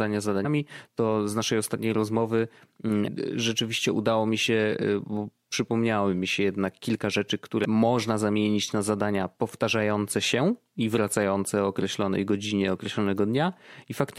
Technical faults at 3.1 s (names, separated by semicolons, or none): damaged data in a compressed stream